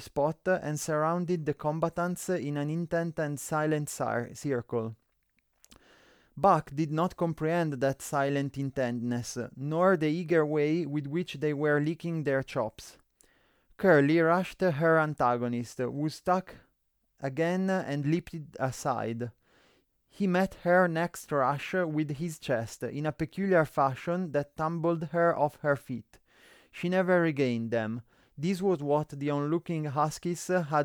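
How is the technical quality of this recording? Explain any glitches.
The recording has no audible glitches, and the signal stays continuous and intact throughout.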